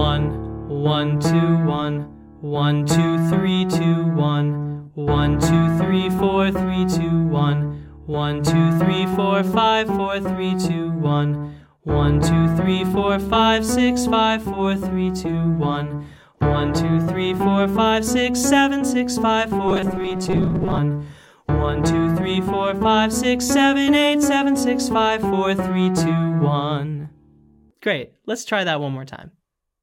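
From 19.68 to 20.78 s the sound turns into a rigid metallic buzz near 188 Hz: robotic sound, likely from about half the audio being replaced by repeated 5 ms buffers. Unlike dropouts, there is no silence.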